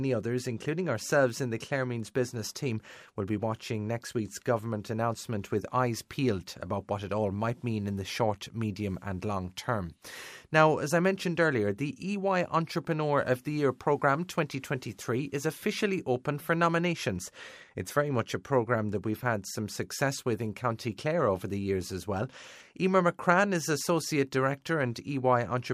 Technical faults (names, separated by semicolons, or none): none